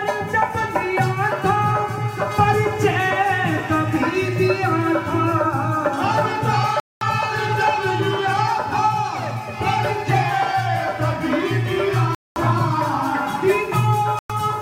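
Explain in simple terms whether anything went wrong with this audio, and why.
The sound cuts to silence three times: 6.80 to 7.02 s, 12.15 to 12.37 s, and 14.19 to 14.32 s. Each gap ends abruptly or with a very quick fade, and the sound picks up further along rather than where it stopped. That pattern is likely a Bluetooth dropout, where late wireless data is discarded, not a pause or stutter.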